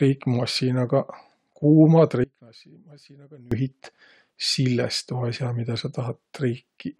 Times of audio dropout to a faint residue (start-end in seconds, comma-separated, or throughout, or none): 2.24-3.52